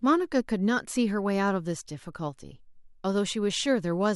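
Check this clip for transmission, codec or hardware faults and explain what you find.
Listening through the speech, nothing stood out as a transmission, codec or hardware problem.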